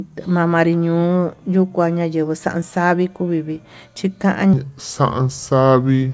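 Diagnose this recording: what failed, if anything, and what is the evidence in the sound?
From 4.53 s to the end at 6.13 s, the speech drops abruptly to a lower, slower delivery, a wrong sample rate fault at the playback stage. Speed falls to 0.73 of normal and pitch drops about 5.5 semitones together, with no change in timbre beyond the shift. That locked ratio means the samples were clocked out more slowly than they were captured, with no resampling, consistent with 22 kHz material played at 16 kHz.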